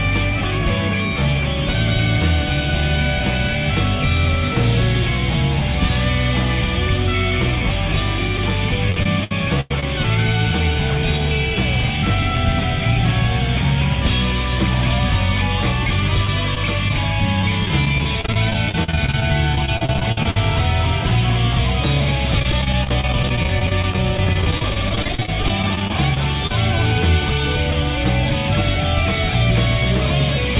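Audio carried over a call link, band-limited with nothing above 4 kHz, which fits a narrowband G.711-style codec, shows short concealed packet loss at 8.37–8.39 s, 16.25–16.29 s, 16.55–16.57 s and 16.88–16.91 s. Each hole is only 10 to 20 ms of missing audio. The receiver bridges it by extending the preceding sound and crossfading back, so it comes through as a brief smear or wobble rather than silence. Repeated packet loss with a robotic, choppy character occupies three stretches. From 8.9 to 9.83 s there are 7 gaps, the longest 96 ms, with about 26% of the span synthesized. From 17.42 to 20.37 s there are 31 gaps of up to 49 ms, about 19% concealed. From 22.40 to 26.51 s there are 56 shorter gaps of up to 32 ms, about 17% concealed. The holes recur too closely for the audio to recover between patches, so the repeated extrapolation turns choppy and fragments go missing.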